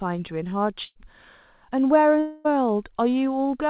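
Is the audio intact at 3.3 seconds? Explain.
Yes, the audio is intact at 3.3 seconds, with no fault at that moment.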